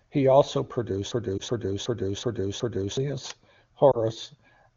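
From 1.12 to 2.97 s the speech stops moving forward and a single fragment of about 0.37 s repeats five times, like a skipping record, cycling at about 2.7 per second. This is a system hang loop: the computer or driver froze while the sound hardware kept replaying the same ring buffer. The loop length fits a 16384-sample buffer, and roughly two seconds of real audio never arrive.

Inside that stretch, between 1.38 and 1.42 s, there is a brief dip and warble. Another follows between 3.92 and 3.98 s. Each is a lost AMR speech frame, a single 20 ms frame that failed its checksum after a radio error. The decoder covered the gap by reusing the last good pitch and vocal-tract settings at reduced gain. This causes the momentary sag before the speech recovers. The AMR wideband (HD Voice) codec itself sounds clean, which points to one of its higher bitrates.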